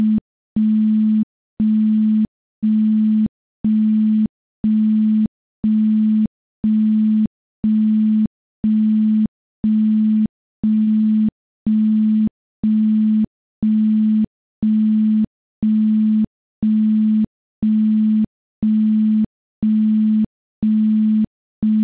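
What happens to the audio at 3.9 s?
Right around 3.90 to 3.94 s there's a short concealed packet loss: about 20 ms of audio simply didn't arrive in time, and the receiver papered over the gap by stretching out what it had just played before easing back into the real signal. What you hear is a quick smear or wobble rather than a clean dropout, sitting inside the band-limited call sound that stops at 4 kHz.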